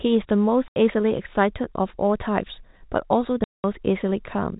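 Packet loss filled with silence breaks this speech at 0.68 to 0.76 s and 3.44 to 3.64 s. The 80 ms and 200 ms gaps fit 20 ms packets, with hard edges, over a band-limited G.711 telephone sound.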